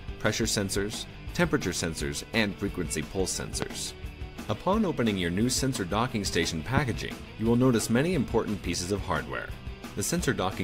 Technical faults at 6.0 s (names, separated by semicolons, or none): none